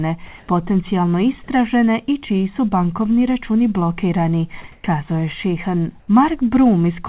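From 0.26 to 0.48 s, just before "potencijalno istražene i čiji", the background becomes steady, featureless hiss about 7 dB louder, then again at 4.72–4.84 s after "su bankovni računi blokirani" and at 6.0–6.08 s, each about 3 dB quieter. This is comfort noise in place of the background, likely from discontinuous transmission. On a spectrogram these gaps show as flat, even noise capped at 4 kHz by the G.711 call path, with a level step in the waveform at each edge.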